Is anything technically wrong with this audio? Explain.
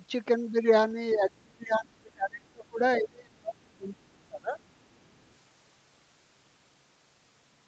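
Yes. Other side's voice leaking through: a second voice surfaces at 1.1 to 1.16 s, about 15 dB below the talker, and from 4.92 to 5.25 s at roughly 40 dB down. This is likely far-end loudspeaker sound that the echo canceller left in the microphone signal.

Speech suppressed in double talk: from 1.13 to 2.81 s and from 2.97 to 4.6 s the voice dips, at its deepest by around 30 dB, across roughly one and a half seconds each time. The likely cause is an echo canceller that, hearing the loudspeaker while this side talked, could not separate the two and turned both down.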